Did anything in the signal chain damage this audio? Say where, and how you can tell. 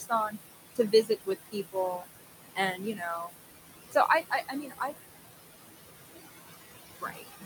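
Yes, at the call-processing stage. Noise suppressor artifacts run through the whole clip: the room noise, about 9 dB under the speech, is pulled down by about 18 dB in gaps and swells back under speech. On a spectrogram the noise floor pumps in blotchy, frame-sized patches.

Speech cut by the noise suppressor occurs at 0 to 0.37 s, 0.75 to 2.05 s, 2.54 to 3.36 s, 3.91 to 4.93 s and 6.88 s to the end. Quiet speech energy, a few hundred milliseconds in each span, was judged noise and dropped by about 14 to 21 dB. The waveform shows shrunken stretches of quiet speech.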